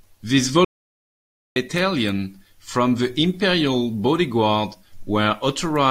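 At 0.65 s the speech hits an audio dropout to silence lasting about 0.91 s until 1.56 s, dead silence with no room tone, likely a lost input link.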